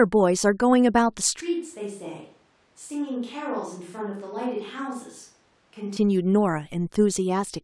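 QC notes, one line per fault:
1.41–5.97 s, switch to a distant microphone: speech abruptly turns roomy and bass-light, about 10 dB quieter, with room noise up; likely the close mic dropped out.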